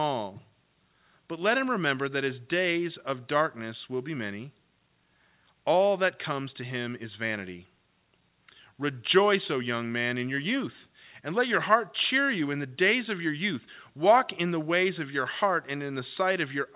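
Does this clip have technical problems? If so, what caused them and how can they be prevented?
No, there are no technical faults in this clip. The audio shows the narrow band of a normal call path, with nothing above 4 kHz, which fits a G.711 mu-law telephone codec.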